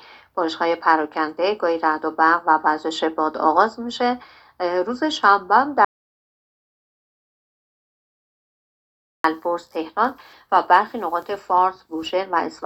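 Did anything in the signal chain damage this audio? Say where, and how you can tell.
Yes, there's an audio dropout to silence from 5.85 to 9.24 s: 3.4 s of dead silence with no room tone, most likely a lost input link feeding the recorder.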